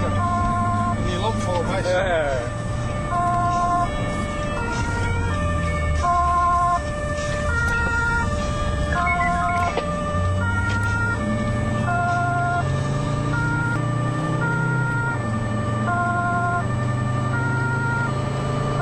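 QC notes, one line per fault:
Throughout, USB whine: a thin, steady, fixed-pitch whistle sits at 8 kHz, roughly 30 dB under the sound. Current drawn in the bus's 125-microsecond microframes leaks in through power or ground, stamping that 8 kHz rate onto the audio.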